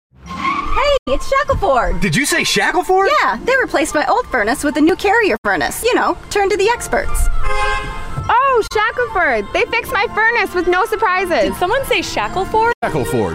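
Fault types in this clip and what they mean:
AAC frame loss with muting: lost frames decode to silence, leaving four soft-edged 40 to 110 ms gaps, blank spectrogram columns with tapered waveform edges.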